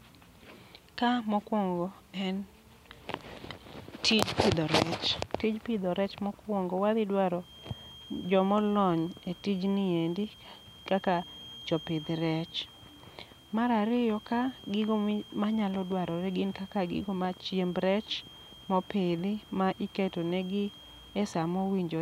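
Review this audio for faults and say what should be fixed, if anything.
From 7.35 s, right after "pidho rech mokwongo wadhi", a thin 3.2 kHz feedback whistle sits about 25 dB under the speech to the end, likely a speaker-to-mic loop hovering at feedback. Drop monitor gain or notch that frequency.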